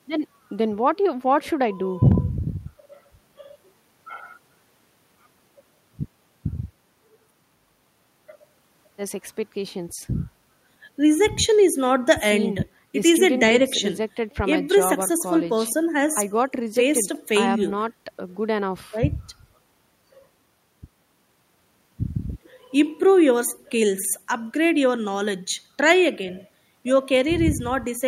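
No technical faults are audible anywhere in the recording.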